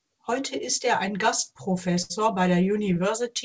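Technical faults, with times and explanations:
2.02–2.12 s and 2.94–2.97 s, short stall from a late packet: a packet arrived late and the jitter buffer ran dry, so the speech gets held for 78 ms, then 17 ms, before carrying on with nothing lost.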